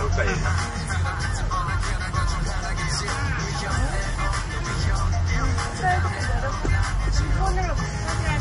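From start to finish there's nothing above about 10.6 kHz, and two different kinds of compression grit sit on top of each other, which points to transcoding between lossy codecs, likely a low-bitrate WMA pass followed by a similarly starved MP3 encode.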